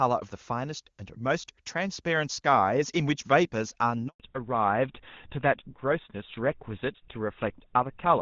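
At 4.08 s a handover gap cuts the speech to silence for 120 ms as the call switches networks. It is a clean dropout, not a smeared or repeated packet loss. From 4.20 s a fallback to narrowband removes everything above 4 kHz, leaving the speech duller and coarser to the end. It is a lasting band limit, unlike a brief codec glitch.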